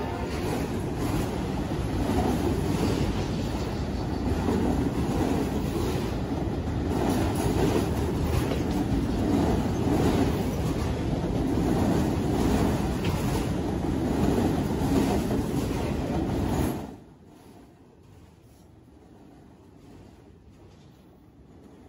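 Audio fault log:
Nothing here needs logging; it all sounds just as it should.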